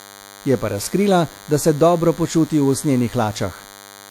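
Throughout the speech, a DECT cordless phone buzz sits well below the voice: a thin 100 Hz buzz rich in harmonics, from rectified radio bursts arriving every 10 ms.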